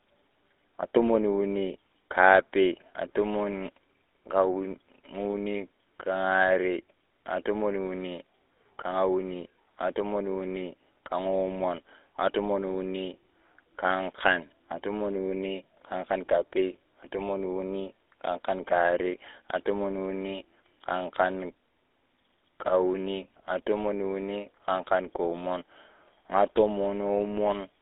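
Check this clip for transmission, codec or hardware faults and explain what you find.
One fault runs through the whole clip: GSM full-rate codec coding. The speech is confined to roughly 300 Hz to 3.6 kHz. The codec models the vocal tract and excites it with sparse regular pulses. That leaves a plainly audible buzzy, gravelly roughness, which fits a 13 kbps rate.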